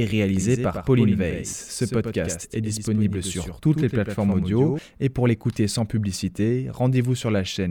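From 0.37 s to 4.79 s the speech has a doubled audio track. A dry copy trails about a tenth of a second behind, about 5 dB quieter. It cuts off abruptly before "et pour l'écouter sans". A slower second capture path is the likely cause.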